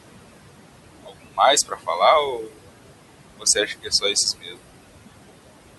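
Noise suppressor artifacts run through the whole clip. The suppressor treats the room noise, about 9 dB below the speech, as steady noise and pulls it down by about 21 dB. The background sinks between phrases and rises again under the speech.

Speech cut by the noise suppressor occurs six times: 0.09 to 0.33 s, 1.04 to 1.13 s, 1.66 to 1.89 s, 2.38 to 2.58 s, 3.38 to 4.16 s and 4.40 to 4.57 s. Quiet parts of the speech were taken for noise and lowered with it, by about 15 to 22 dB. They sound faint or swallowed. The longest stretch loses roughly a third of a second.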